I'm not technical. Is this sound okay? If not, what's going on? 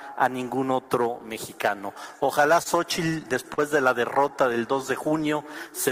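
No. At about 2.63 to 2.67 s, a sound is held a little too long, with a faint buzz or dip. This is a short stall from a late packet. The audio arrives in small chunks, and one came late, so the player briefly stretched the last bit of sound for about 26 ms to cover the wait. It then carried on from exactly where it left off, so nothing is lost, but everything after it plays that much later.

From about 3.11 to 3.60 s, the sound drags and catches several times in a row. These are repeated stalls (stutter). Chunks kept arriving late, so the player ran out four separate times, and each time it held the last sound until more arrived. The longest hold is 40 ms, and together they fill 63 ms, roughly an eighth of that half-second. Again nothing is missing, but the flow is uneven and jerky.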